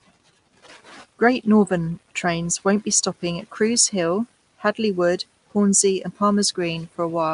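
Throughout, the speech carries a rough, hissy halo and smeared, underwater quality, likely from Nellymoser compression; the spectrogram shows noise-filled patches and nothing above 10.6 kHz.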